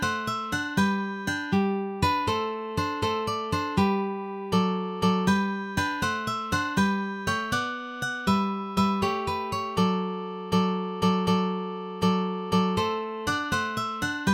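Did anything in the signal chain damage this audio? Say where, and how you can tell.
No, no signal chain damage.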